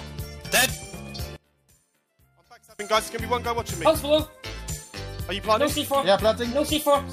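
From 1.36 to 2.79 s, one stereo channel was likely inverted, so its polarity runs opposite to the other. When the two are summed to mono, everything they share cancels, and the level falls by about 28 dB. What remains is only the small difference between the channels: a faint residue with the centred content almost gone. After 2.79 s, the full sound returns.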